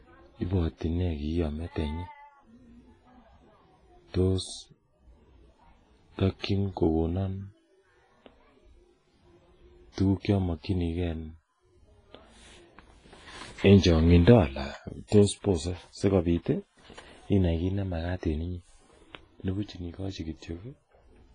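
Throughout, the speech sounds ringing and washy, with hiss swelling and receding alongside it and nothing above 10.5 kHz, likely heavy WMA compression at roughly 24 kbps, unlike steady broadband noise.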